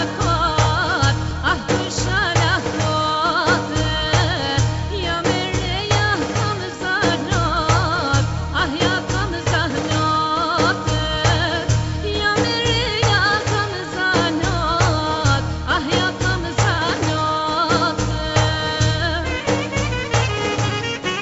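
No faults found; the audio comes through a call path whose band stops at 8 kHz, which fits a wideband call codec such as G.722.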